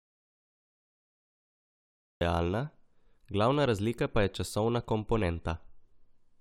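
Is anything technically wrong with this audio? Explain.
Yes. From the very start until 2.21 s the clip is in an audio dropout to silence: silence with no room tone. The input was likely lost, through a disconnected device, failed link or mute, while recording continued, so the speech then resumes abruptly mid-flow.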